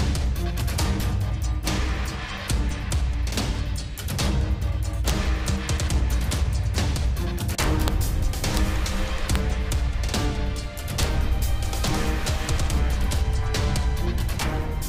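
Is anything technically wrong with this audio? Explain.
Yes. Integer overflow cracks occur at 1.67, 5.08, 7.60 to 7.88, 8.44 to 8.57, 9.36, 9.72, 11.03 and 11.88 s. When loud peaks push the summed or amplified signal past the largest value an integer can hold, it wraps to the opposite extreme instead of being held at the limit. Even with peaks at most about 1 dB over, each overshoot jumps across the full range, producing violent, sharp cracks far harsher than ordinary clipping.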